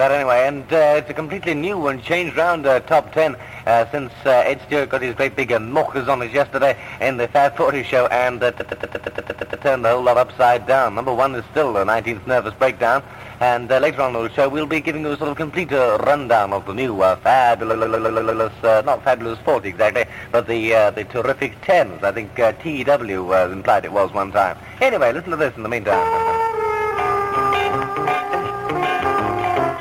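The audio stutters three times from repeated frames: a block of about 116 ms loops from 8.59 to 9.64 s and again from 17.72 to 18.42 s, and a block of about 139 ms loops from 26.12 to 26.40 s, adding about 2 s in total. The block lengths fit runs of five and six compressed frames being sent more than once. On a spectrogram or waveform, each stretch shows the same short pattern copied side by side at a fixed period.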